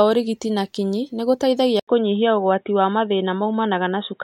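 At 1.80 s the speech drops out for 80 ms, then returns dull and boxy with nothing above 3.8 kHz until the end, likely an input switched to a poorer device. The spectrogram shows a hard ceiling. The waveform keeps its level over a faint new noise floor.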